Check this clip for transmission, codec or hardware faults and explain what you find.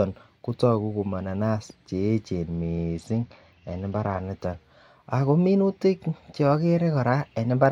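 A Bluetooth SBC bit pool drop runs from 2.54 to 4.22 s, beginning just after "kotoku ko mananas cheyechen". The link appears to have congested, so the sender cut the SBC bit pool, a fall from around 28 to 9 that fits a stream near 78 kbps. Starved of bits, the highest sub-bands get almost nothing and the remaining ones are coarsely quantised. The speech loses its treble and turns dull, with a gritty noise riding on it until the rate recovers at 4.22 s.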